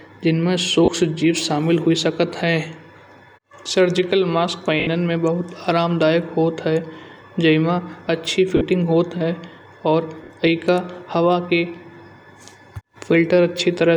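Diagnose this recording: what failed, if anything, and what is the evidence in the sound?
Lost LE Audio frames on the Bluetooth link: at 0.85, 4.80, 8.57 and 10.24 s, LC3 concealment fills 30 to 70 ms with noisy smears that show as blurred, harmonic-less spectrogram patches.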